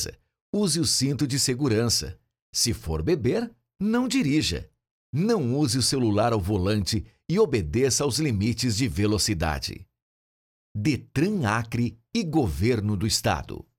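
No technical faults are audible anywhere in the recording.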